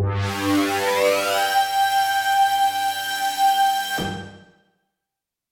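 Nothing in the audio points to a technical problem: there are no breaks, distortion or other defects to be heard.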